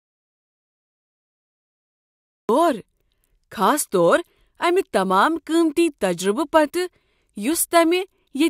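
An audio dropout to silence is already under way when the clip begins and lasts until 2.49 s: silence, with no room tone at all. The input was likely lost, so the recorder kept writing silence, and the speech only comes in partway through.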